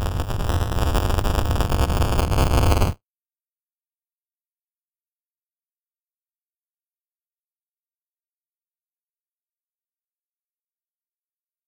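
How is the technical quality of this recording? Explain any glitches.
The technical quality is compromised by buffer tearing, which runs through the entire recording. Wherever there is sound, a steady robotic buzz at 200 Hz rides on it, a rattling edge that disappears in silence. The writing program and the playback hardware have slipped out of step around the ring buffer, so they cross inside each period. A small slice of every buffer, roughly a tenth, still holds audio from about 10 ms earlier, with hard joins at both ends, and those repeating splices at a 5 ms period produce the buzz.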